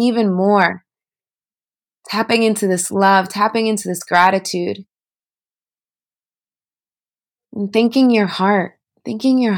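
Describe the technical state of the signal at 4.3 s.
Hard clipping runs from 4.14 to 4.27 s, right after "into this". For that eighth of a second the level goes about 3 dB beyond what the signal path can carry, so the waveform peaks are sliced off flat. Those square corners generate harmonics high in the spectrum, heard as a brief crackle on the loudest moments. Soft saturation would round the peaks and sound warmer; this is abrupt and gritty, with edges that come and go with the peaks.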